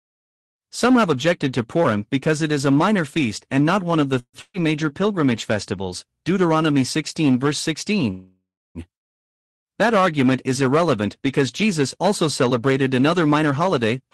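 At 4.19 s, just after "not one of the", the sound stalls for about 140 ms. It smears into a fading buzz or hiss, then about 60 ms of silence. This is a call audio freeze, likely from delayed packets draining the jitter buffer. Nothing is lost. The speech is only pushed later.

From 4.41 to 4.60 s, right before "major pilgrimage festivals", comes a burst of packet loss. The last sound is held and fades. Then the speech resumes with about 120 ms gone.

A longer freeze runs from 8.11 to 8.78 s. It fills about 645 ms and ends in about 280 ms of silence. No speech is missing.

After "also celebrated", from 12.93 s to 14.11 s, a jitter buffer speed-up plays the speech about 8% fast at unchanged pitch. The buffer trims short pitch-period slices, roughly a tenth of a second in all, to shed built-up delay. The effect is a hurried ending.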